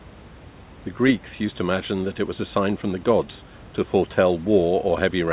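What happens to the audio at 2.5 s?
Nothing goes wrong at 2.5 s; the speech continues intact through that moment.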